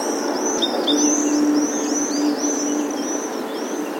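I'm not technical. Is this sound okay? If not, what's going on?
No. At about 0.57 seconds the sound suddenly jumps forward, as if nearly half a second were cut out and the two ends stitched together with no pause. This is a skip ahead: a chunk of audio was dropped in transit or by the playback buffer, so playback leapt to what came next.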